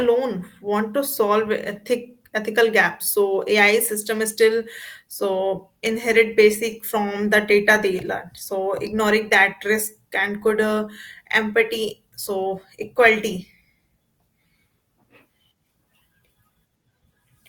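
Speech recording, with no technical faults detected anywhere in the clip.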